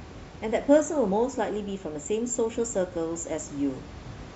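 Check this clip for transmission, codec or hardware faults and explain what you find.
No transmission, codec or hardware faults turn up in this clip, and the room noise sitting about 18 dB below the speech belongs to the recording itself.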